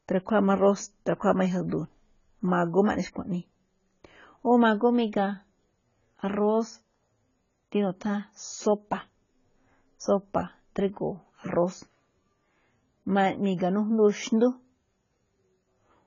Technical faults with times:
0.00-16.06 AAC compression

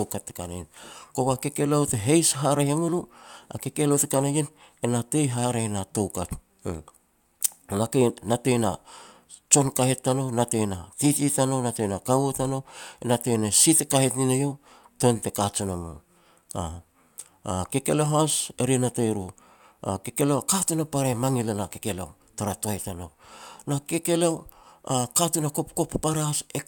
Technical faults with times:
none

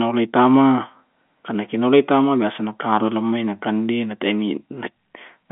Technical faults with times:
none

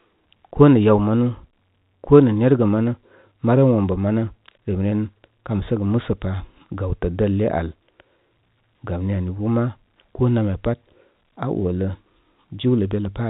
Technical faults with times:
none

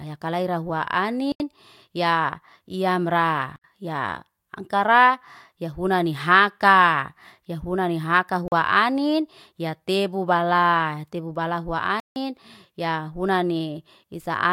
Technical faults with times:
1.32-1.40 block of digital silence
3.56-3.64 block of digital silence
8.48-8.52 block of digital silence
12.00-12.16 block of digital silence

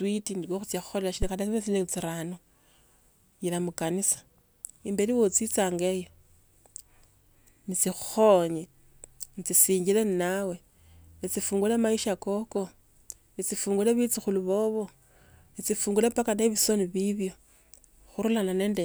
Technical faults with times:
1.22-1.31 phantom power thump

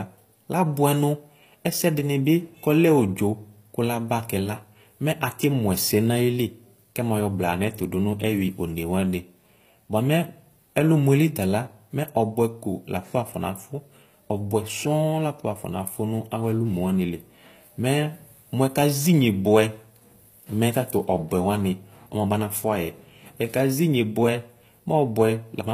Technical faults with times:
0.00-25.73 HE-AAC compression

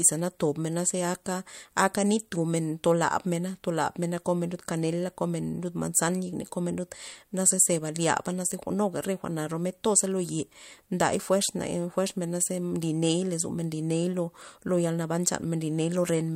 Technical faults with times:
none

